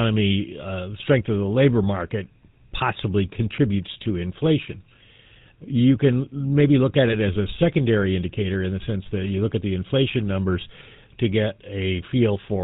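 GSM full-rate codec coding runs through the whole clip. The speech is rebuilt from a vocal-tract filter driven by sparse, regularly spaced pulses, with nothing above 4 kHz, so every syllable carries a buzzy, gravelly roughness, which fits the 13 kbps full-rate codec.

GSM bit errors strike from 7.06 to 7.15 s, between "can maybe look at" and "as a secondary indicator". Corrupted filter, pitch and gain values reach the decoder, twisting the spectrum into a brief squawking gargle. The 90 ms burst points to about four damaged 20 ms frames.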